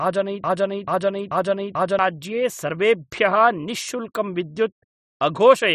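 From the very start the speech is already caught in a broken-record loop that runs until 1.99 s: a fragment about 0.44 s long plays four times back to back, identical each pass, and whatever should have been heard in that stretch never arrives. The likely cause is a stalled player or stream resending the last piece it held. On a waveform or spectrogram the same block shape tiles side by side at regular 0.44 s intervals, with hard seams between copies.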